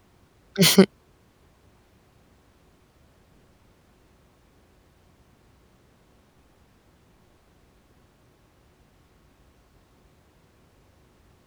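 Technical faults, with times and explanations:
Listening closely to this speech recording, nothing stood out as a technical problem at any point.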